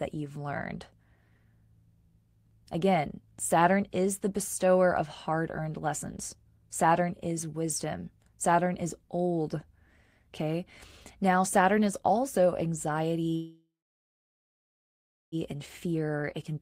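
A call audio freeze runs from 13.35 to 15.35 s in this speech recording. The last sound is carried on as a brief fading buzz or hiss, then drops to silence for about 1.6 s of the roughly 2 s gap. The likely cause is packets held up in transit, so the jitter buffer ran empty and the receiver could only stretch what it had. When the audio resumes it picks up where it stopped, with nothing lost, but everything after it now arrives about 2 s later. A jitter buffer speed-up follows from 15.54 to 16.61 s, where the speech plays at 112% speed with unchanged pitch and sounds hurried. Likely because the delayed packets arrived together, the buffer held more than its target. The receiver repeatedly cut out short pitch-period-length pieces, around 150 ms in total, to bring the delay back down.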